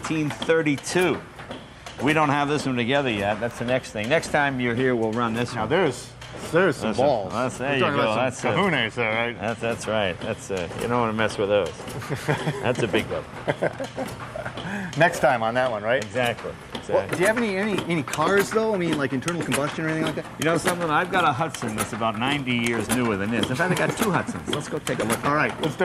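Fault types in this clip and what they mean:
Periodic USB or driver dropouts: from 20.77 to 25.77 s, half-millisecond gaps of silence recur every 0.125 s as steady ticks; their strict regularity separates them from random buffer underruns.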